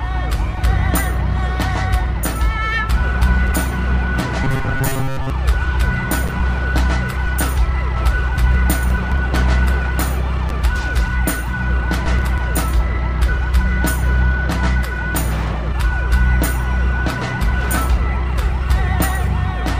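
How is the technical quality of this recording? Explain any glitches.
One glitch stands out. From 4.44 to 5.30 s the sound turns into a rigid, metallic buzz pitched at 134 Hz. This is robotic sound from repeated short buffers. New audio likely arrived too seldom, so a segment of about 7.5 ms was replayed over most of that stretch while the real audio was skipped, and that repetition fixes the buzz at 134 Hz.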